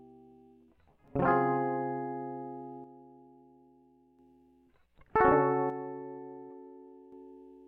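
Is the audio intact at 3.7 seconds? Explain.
No. From 2.84 to 4.19 s the music falls abruptly by about 6 dB, then snaps back. This is one channel dropping out. A stereo side has likely gone silent, halving the shared content in the mono sum and removing whatever only that side carried.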